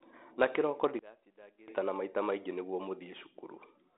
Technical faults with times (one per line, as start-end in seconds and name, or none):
0.99-1.68 sudden gain jump